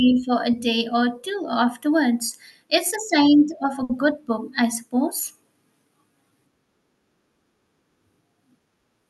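At 3.83 s the speech briefly stalls. This is a short stall from a late packet. A packet missed its playout time and the jitter buffer ran dry. The receiver held the last sound for about 60 ms until the packet arrived, then resumed from the same point. Nothing is lost. From 3.83 to 3.91 s a sound drags on slightly too long, with a faint buzz or dip. Everything after it plays about 60 ms later. The call codec limits the band to 12 kHz throughout.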